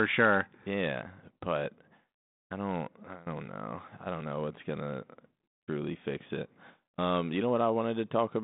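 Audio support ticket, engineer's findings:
No fault found on the speech. Telephone-band path audible, roughly 150 Hz to 3.7 kHz with nothing above 3.8 kHz, and only light coding texture, consistent with G.726 ADPCM at 32 kbit/s as on a DECT link.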